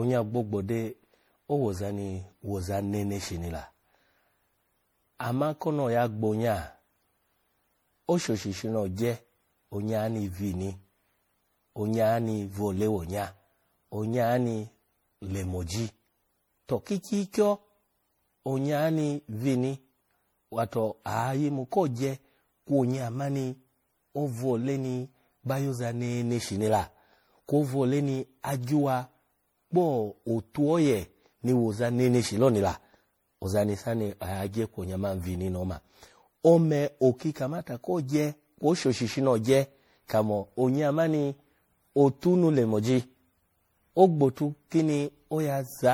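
Speech, likely re-encoded as MP3 about seven times at what sounds like 64 kbit/s. This generation loss leaves it swirly, hollow and smeared throughout, with blurred attacks.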